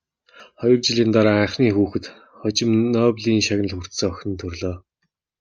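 Damaged data in the compressed stream from 0.40 to 0.43 s makes the decoder misread frames and lose sync, giving a brief glitch in the speech.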